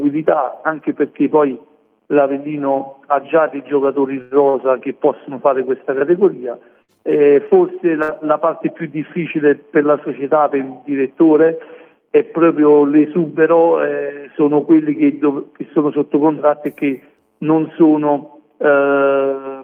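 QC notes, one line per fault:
4.21–4.34 s and 4.49–4.58 s, short stall from a late packet: the jitter buffer ran dry, so the last sound is held for about 96 ms and then 44 ms before playback resumes exactly where it stopped. Nothing is skipped, which distinguishes these stalls from loss. The second stall trims about 8 ms to catch up.
6.82–6.91 s and 8.02–8.11 s, burst of packet loss: in each case about 60 ms of audio never arrived. The receiver filled roughly 60 ms with a fading continuation of the preceding sound, then jumped ahead. Unlike the stalls, material is missing after the fill.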